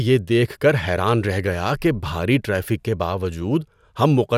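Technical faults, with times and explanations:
No technical faults can be heard in this speech recording. Nothing in the signal path breaks up, drops out or distorts at any point.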